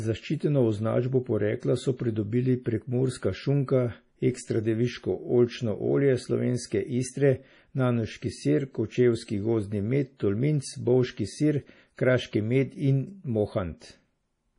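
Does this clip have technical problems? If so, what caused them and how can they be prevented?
Yes. Throughout, nothing is heard above 10.6 kHz and the speech sounds watery and swirly, likely from heavy MP3 compression at a starved bitrate, which fits roughly 32 kbps. To prevent it, encode at a higher bitrate or use a lossless format.

Pre-echo at 11.95 to 11.98 s, just after "med tolminc bovški sir" and before "kraški med in": a short hiss, about 36 ms long, leads a sharp attack because the codec spreads quantisation noise across the whole block. A higher bitrate or an encoder that switches to short blocks on attacks prevents this.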